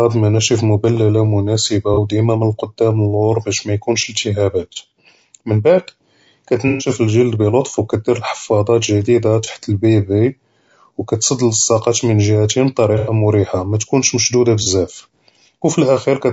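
From the first moment to the last, the speech has a rough, grainy texture, with a hiss filling the gaps between pitch harmonics and a thin, synthetic-sounding top band. This is most likely low-delay AAC compression of the AAC-ELD kind used in video calls. Its short frames resolve voiced pitch poorly, and the damage is plainly audible, which fits a bitrate around 32 kbps. Unlike broadband noise, the grain follows the voice and disappears in pauses.

AAC frame loss with concealment then breaks in six times. There are brief smeared, phasey patches at 1.94–1.98 s, 4.73–4.77 s, 9.44–9.49 s and 14.63–14.67 s. Each sounds like roughly one 30 ms frame lost. Longer patches at 6.68–6.88 s and 12.98–13.13 s sound like about 120 ms and 90 ms lost. In each case the decoder repeats the last good spectrum with scrambled phase, so the sound blurs into a noisy smear instead of dropping to silence or clicking as a plain dropout would.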